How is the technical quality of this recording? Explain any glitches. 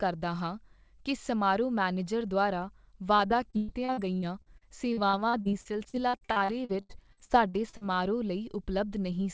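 The recording has one clear glitch: a long choppy, robotic stretch in the middle of the speech.

From 3.16 s to 7.84 s, just after "ਕੀ ਸਮਾਰੋਹ ਮੈਨੇਜਰ ਦੁਆਰਾ", the speech breaks up into a robotic, stuttering texture with pieces missing. This is repeated packet loss (robotic sound). Dozens of short dropouts, the longest about 114 ms, hit in quick succession. Each was papered over by stretching the last received sound, so roughly a quarter of that span, about 1.15 s in total, is synthetic fill rather than real audio.

The audio throughout has nothing above 8 kHz, which points to a wideband call codec such as G.722 at 64 kbps in the call path.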